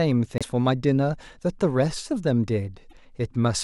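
At 0.38 s and again at 2.89 s the speech jumps forward and a brief glitch of about 44 ms takes its place, slightly under two frames of roughly 26 ms each. The likely cause is a broken MP3 bit reservoir: frames were lost, so the frames right after each gap reached back for borrowed bits and decoded bytes belonging to other frames, producing garbage instead of the missing audio.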